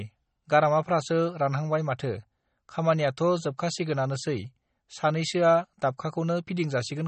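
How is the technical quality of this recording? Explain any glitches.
The quality is poor: throughout the clip, lossy-codec damage is plainly audible, most likely MP3 compression at a low bitrate, around 32 kbps. Nothing remains above about 8.3 kHz, and sibilants turn swirly and metallic. A spectrogram shows a hard ceiling at 8.3 kHz and flickering gaps where weak components drop in and out.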